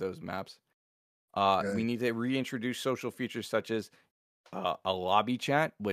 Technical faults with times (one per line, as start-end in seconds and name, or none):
none